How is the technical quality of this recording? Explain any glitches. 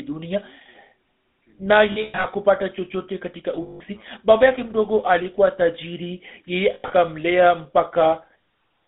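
The technical quality is poor: the whole clip of speech carries plainly audible codec damage, and three short dropouts break it up.

GSM full-rate codec damage runs throughout. The codec models the vocal tract and excites it with a sparse, regular pulse train, so the speech takes on a buzzy, gravelly roughness that is plainly audible, fitting the 13 kbps full-rate mode. The line band is about 250 Hz to 3.7 kHz. A spectrogram would show an empty band above 3.7 kHz and thin low end, with harmonics smeared into grainy texture.

Lost GSM frames occur at 1.92 to 2.26 s, 3.62 to 3.81 s and 6.74 to 6.91 s. The decoder fills each gap by repeating the last good frame's settings, producing a rough, metallic ring instead of speech. The first event loses about 220 ms scattered across 320 ms, with the longest run around a tenth of a second. The second loses 180 ms. The third loses 120 ms spread over 160 ms. 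On a waveform these appear as overly regular stretches. A spectrogram would show frozen, horizontally smeared bands.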